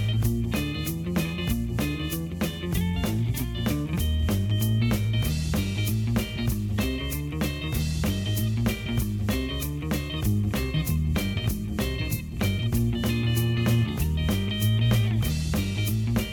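Nothing goes wrong anywhere in this one, and there's no technical fault to point to at any moment in the audio.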